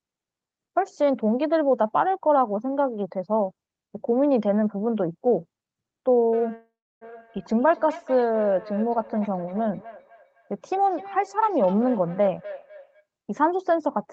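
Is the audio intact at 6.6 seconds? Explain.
No. A call audio freeze runs from 6.55 to 7.03 s. It was likely caused by delayed packets that emptied the jitter buffer. About 0.46 s of fill is inserted, with roughly 0.31 s of silence, and nothing is lost. Feedback echo between two devices also spans 6.32 to 13.06 s: a second device replays the sound into the microphone, so it returns roughly every 0.3 s, peaking about 16 dB below the speech.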